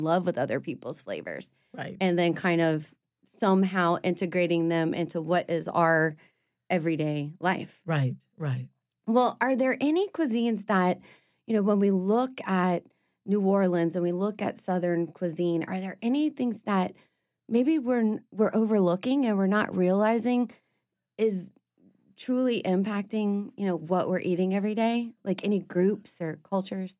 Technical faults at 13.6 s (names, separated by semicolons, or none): none